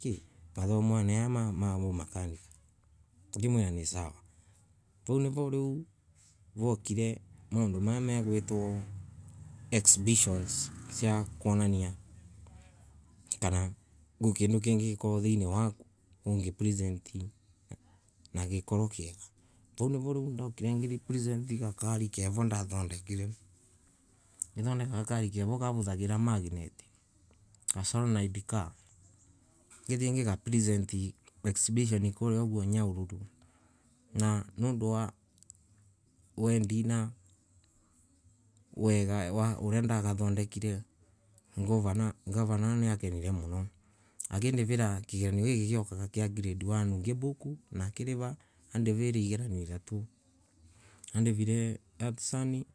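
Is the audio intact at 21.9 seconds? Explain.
Yes, the speech at 21.9 seconds plays through intact, with no dropout, click, distortion or other fault at that moment.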